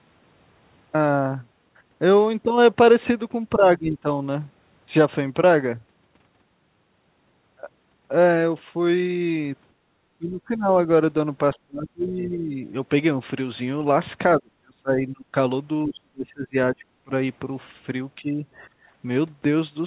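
The speech dips six times while the far side seems to be talking over it, at 3.55 to 4.08 s, 10.18 to 10.72 s, 11.55 to 12.59 s, 14.38 to 15.35 s, 15.87 to 17.12 s and 18.17 to 18.45 s. The dips range from a light pull-down of around 10 dB to about 35 dB deep, and the longest affected stretches run close to a second. That's likely speech suppressed in double talk: the echo canceller can't tell the near talker from its own loudspeaker echo, so it turns everything down and the speech thins or chops out in pieces. Between and after those, at 9.75 to 9.9 s and again at 18.73 to 18.88 s, the room sound briefly sinks, by about 7 dB the first time and about 18 dB the second, for roughly 0.15 s each. That's background gated by the echo canceller, which clamps the microphone while the loudspeaker plays and then lets go. Underneath all of it, nothing above 4 kHz is present, which fits a narrowband G.711-style call codec.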